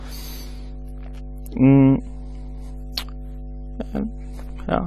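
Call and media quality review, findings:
Mains hum, throughout. Steady 50 Hz tone with low harmonics under the speech, roughly 15 dB below it. Ground loop or nearby transformer coupling the power line into the signal path. Check grounding and cable routing.

Band-limited, dull speech, throughout. Nothing above 14.1 kHz. Damage plainly audible: smeared detail, warbling or fizzy texture on sustained sounds and sibilants. Likely AAC compression (AAC-LC) at a low bitrate, consistent with about 32 kbps, quantising away spectral content.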